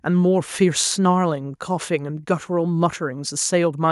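No technical faults can be heard anywhere in the speech recording; the signal stays continuous and stable throughout.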